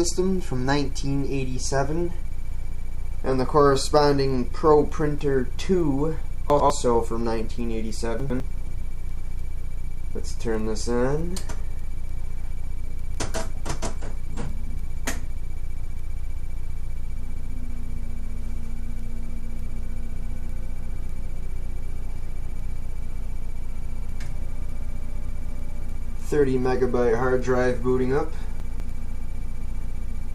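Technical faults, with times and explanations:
6.5–6.7 s, 8.2–8.4 s and 28.6–28.8 s: chunks out of order. Each time, a 100 ms piece of audio arrives one chunk late, so it plays after the piece that should follow it. Nothing is missing, but the two pieces are swapped across a 0.2 s stretch, creating three hard joins where waveforms that don't belong together meet. That is why each spot sounds briefly jumbled.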